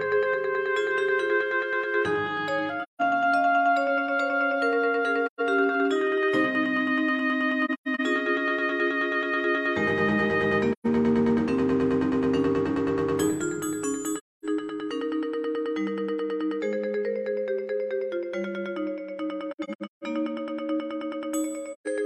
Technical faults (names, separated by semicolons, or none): AAC frame loss with muting